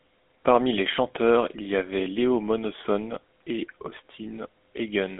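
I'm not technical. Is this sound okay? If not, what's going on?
No. From start to finish the speech has a buzzy, gravelly roughness, and it sounds thin and boxy, like an old mobile phone call. That is the GSM full-rate codec, an early phone-network coder. It keeps only a simplified model of the voice and rebuilds it from a coarse pulse pattern, which causes the grit. It also drops everything above about 3.8 kHz, so the crisp, airy parts of the voice are missing.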